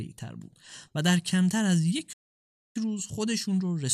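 At 2.13 s the speech halts mid-flow and the output falls to dead silence for about 0.62 s, resuming at 2.76 s. This playback stall likely comes from the player starving for data.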